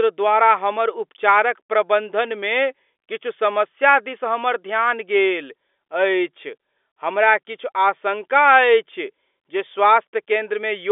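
No technical faults are audible.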